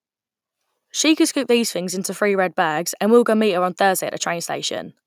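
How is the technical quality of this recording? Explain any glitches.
No glitches can be heard in this recording.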